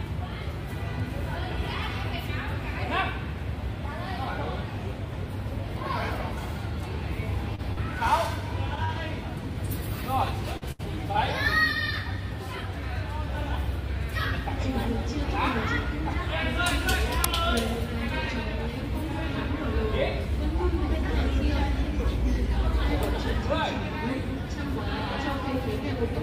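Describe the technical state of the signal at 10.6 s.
At 10.57 to 10.64 s there is a short stall from a late packet. A packet arrived late, the jitter buffer emptied, and the receiver stretched the last sound by about 45 ms before resuming where it left off. Nothing is lost, but that sound is held too long. On a spectrogram the preceding frame's spectrum smears flat, and the waveform shows a repeated stretch that shifts everything after it later by 45 ms.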